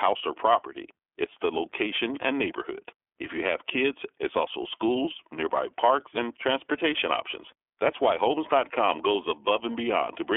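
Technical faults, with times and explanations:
Throughout, iLBC codec: narrowband coding leaves the speech confined to a telephone band of roughly 300 Hz to 3.4 kHz, with nothing above 3.7 kHz. Each frame's excitation is coded independently, which fits 30 ms frames at about 13.3 kbps, giving a plainly audible rough, synthetic texture.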